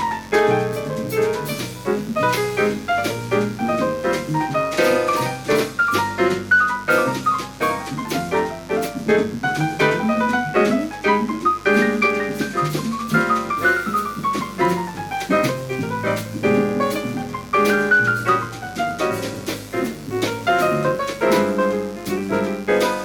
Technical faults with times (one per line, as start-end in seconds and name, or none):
0.00-23.05 mains buzz